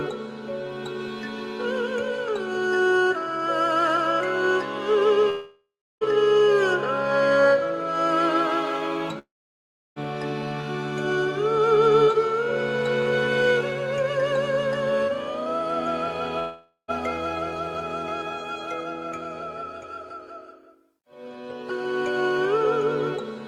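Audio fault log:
5.29–6.04 s, 9.19–9.99 s, 16.39–16.91 s, long network dropout: the sound smears into a fading buzz, then near-silence (about 0.33 s, 0.69 s, 0.09 s), before resuming with roughly 0.72 s, 0.78 s and 0.48 s missing. Likely lost packets, with the receiver padding the gap.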